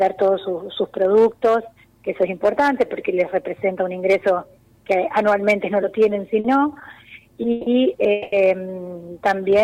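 At 6.39 s the audio hits a short stall from a late packet: the last sound is held for 50 ms until the packet arrives and playback resumes where it stopped, with nothing lost. On a spectrogram it shows as a brief run of smeared, repeated harmonics with a slight dip in the waveform envelope. Two call audio freezes follow, at 7.51 s for 150 ms and at 8.12 s for 200 ms. Each time the final sound is carried on as a fading buzz that never drops to silence, then the audio picks up unchanged, adding delay rather than dropping material. The likely cause is packets held up in transit until the jitter buffer ran empty. Both freezes look like flat horizontal streaks on the spectrogram and a decaying, regular waveform.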